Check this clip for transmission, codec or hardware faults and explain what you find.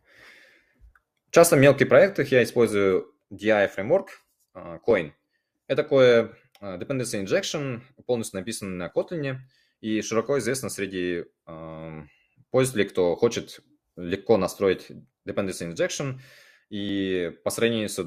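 The speech shows one fault, an overlap between stream segments, at 4.91, 8.90, 12.90 and 16.89 s, roughly every 4 s, just after "injection полностью написано на" and between "известно среди а пользователей" and "кто хочет легко настроить". Overlapping segment time stamps make the player trim 2 to 6 ms of real audio, so the waveform jumps and each point sounds like a tiny skip.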